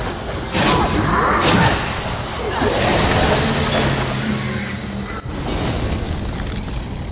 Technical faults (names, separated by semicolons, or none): none